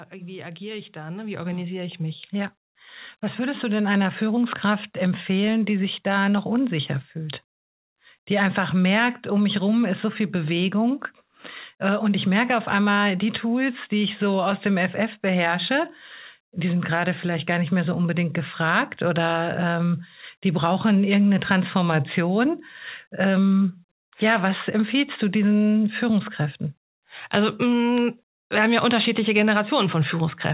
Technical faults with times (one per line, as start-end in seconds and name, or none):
0.10-4.15 automatic gain rising